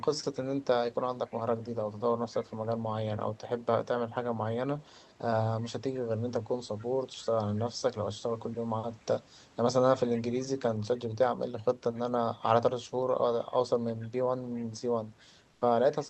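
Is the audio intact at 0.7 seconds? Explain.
No. From 0.0 to 1.7 s there's an echo leak: a faint copy of the speech trailing about 285 ms behind, roughly 30 dB down. It's likely a loudspeaker's sound reaching a microphone that the echo canceller didn't fully clean up.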